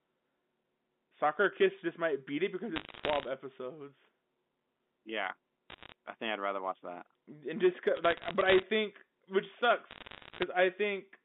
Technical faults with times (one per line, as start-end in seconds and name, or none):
2.76-3.28 bit errors on a digital phone line
5.70-5.92 bit errors on a digital phone line
7.97-8.63 bit errors on a digital phone line
9.91-10.43 bit errors on a digital phone line